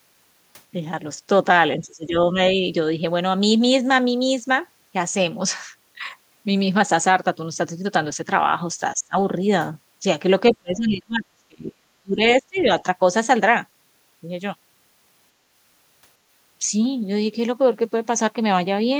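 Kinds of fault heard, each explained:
Speech suppressed in double talk: the talker's level sinks in four patches, at 1.77 to 2.15 s by roughly 15 dB, at 8.93 to 9.15 s by about 30 dB, through most of 10.54 to 12.21 s by around 35 dB, and at 12.39 to 12.7 s by about 25 dB. The sound thins and partly vanishes. The likely cause is an echo canceller that, with both sides talking at once, could not tell the near voice from loudspeaker echo and turned both down.
Other side's voice leaking through: a very brief scrap of a second voice, around 40 ms from 12.57 to 12.61 s, sits roughly 25 dB under the main speech. It falls inside the last suppressed patch. This is likely far-end audio played on the talker's loudspeaker, picked up by the microphone and not fully removed by the echo canceller, so a faint fragment slips into the send path.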